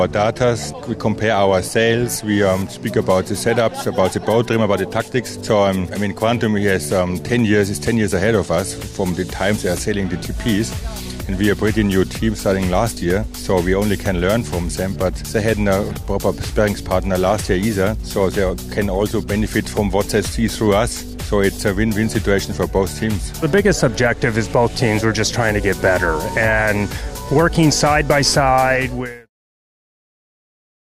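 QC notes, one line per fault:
No faults; sound fades out smoothly by 29.3 s.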